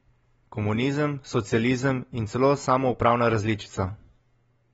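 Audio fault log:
Throughout, AAC compression: speech sounds dull and smeared with a warbling, fizzy edge on sibilants, nothing above 7.6 kHz, likely from low-bitrate AAC-LC around 24 kbps.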